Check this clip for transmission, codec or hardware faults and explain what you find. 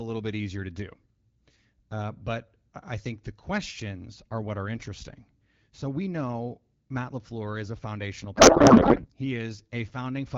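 There is one fault. A codec payload misread runs from 8.35 to 9.10 s, just after "is a foundational". The decoder parses the AMR-WB frames with their fields shifted, which fits octet-aligned packing being read as bandwidth-efficient, so the speech turns into garbled noise and warble.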